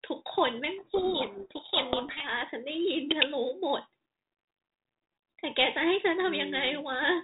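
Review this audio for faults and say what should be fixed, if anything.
From 0.78 to 2.27 s there's a codec payload misread: the G.726 code words get unpacked in the wrong bit order, burying the speech under harsh distortion. To prevent it, make sure both ends agree on the G.726 packing order when the call is set up.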